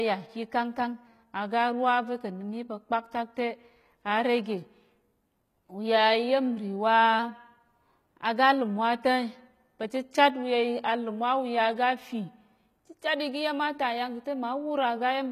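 Right from the start the speech carries HE-AAC compression damage, likely from a low-rate stream around 20 kbps. The top end is rebuilt from copied lower bands, so s sounds come out gritty and lispy, the highs don't sit naturally with the rest, and nothing at all comes through above 14.9 kHz.

From 0.53 to 1.07 s, and again from 7.19 to 8.61 s, there's what is likely a drift correction step. Playback jumps about 5.8% fast, lifting pitch by roughly 98 cents, close to a semitone, so the voice sounds suddenly sharp and hurried before snapping back.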